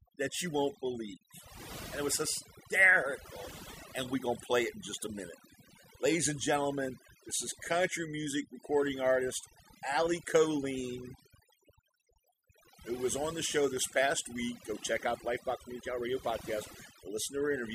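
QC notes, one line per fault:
Throughout, video or display buzz: a 60 Hz field-rate buzz with hash above it sits about 30 dB under the speech, from a screen or video cable coupling into the audio.
Throughout, overdone noise removal: heavy noise reduction gates bands near its noise estimate, leaving near-silent gaps with twinkling specks and quiet parts of the speech removed along with them.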